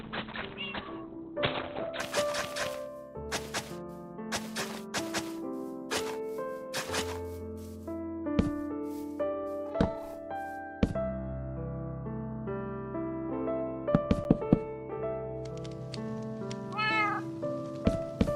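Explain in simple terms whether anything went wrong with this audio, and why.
For the first 2 seconds the sound is dull and muffled, with nothing above 4.2 kHz, then it suddenly turns clear with no gap. This is an adaptive stream starting at a low bitrate: the player began with a small, rough version to start quickly, then switched to a better one.

At 14.24 s there is a tiny tick. This is a block of digital silence: about 10 ms of sound dropped to silence and back with no fade, which fits the program failing to deliver audio in time.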